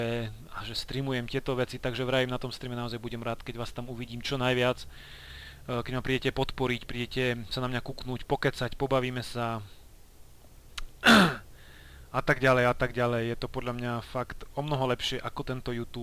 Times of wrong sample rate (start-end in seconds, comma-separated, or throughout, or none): none